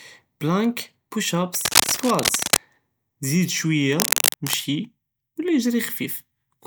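Scratchy, rustling bursts sit over the speech from 1.54 to 2.58 s and again from 3.95 to 4.57 s, roughly as loud as the speech itself. This is cable scratch noise, likely from a worn cable or connector being moved, its contact resistance fluttering rapidly.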